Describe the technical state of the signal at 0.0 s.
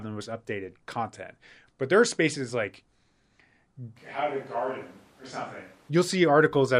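At 0.0 s the speech signal is intact, with no audible fault at that point.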